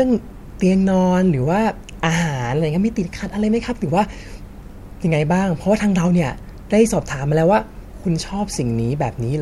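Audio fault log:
Nothing to log here, since no faults turn up anywhere in this speech clip.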